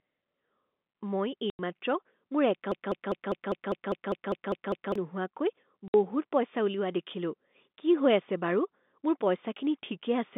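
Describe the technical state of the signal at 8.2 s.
At 8.2 s the speech is intact, with no fault present, and what can be heard is the narrow telephone band of G.711 coding, running roughly from 200 Hz to 3.6 kHz.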